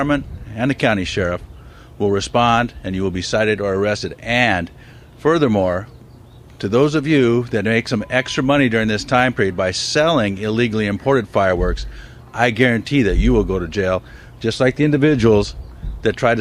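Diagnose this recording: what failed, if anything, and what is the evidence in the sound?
Nothing failed here as far as I can hear; at no point along the chain from capture to playback does the sound do anything that would point to a problem.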